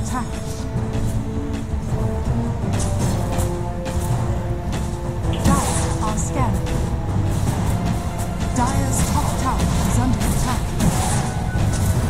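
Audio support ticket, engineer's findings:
USB whine, throughout. Steady fixed-pitch tone on the 1 kHz USB frame rate, strongest at the 2 kHz harmonic, roughly 40 dB under the programme. Bus current drawn in 1 ms frames coupling in via shared power or ground.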